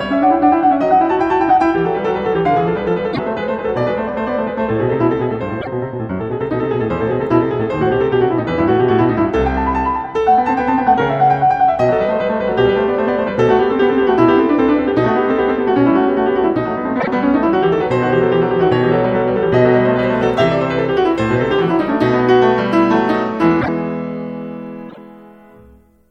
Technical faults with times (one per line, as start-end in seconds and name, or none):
3.12-3.19 broken MP3 bit reservoir
5.60-5.67 broken MP3 bit reservoir
16.99-17.08 broken MP3 bit reservoir
19.99-26.11 pre-emphasis left on
23.60-23.69 broken MP3 bit reservoir
24.88-24.98 broken MP3 bit reservoir